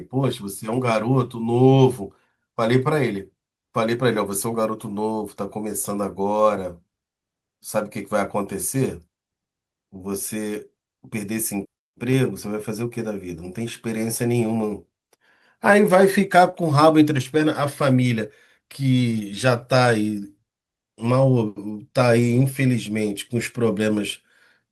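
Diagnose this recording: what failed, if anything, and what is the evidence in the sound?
Packets failed to reach the decoder in time, so this is a network fault handled by the codec. In the short concealed packet loss, about 40 ms of audio went missing between 16.49 and 16.62 s. The receiver extended the preceding speech, continuing its pitch where it was voiced and using shaped noise where it was not, then crossfaded back into real audio. The result is a short smear or wobble. The timing shifts by a few milliseconds, so a brief consonant can blur away.

Other losses were recovered through Opus in-band forward error correction, giving three instances of a lost packet rebuilt from error correction: 16.53 to 16.55 s, 19.11 to 19.21 s, and 22.19 to 22.41 s. They rebuild about 20, 60 and 120 ms, which fits one, three and six lost 20 ms packets. In each case the next packet carried a low-bitrate copy, so nothing drops out, but those stretches sound grainier and noisier.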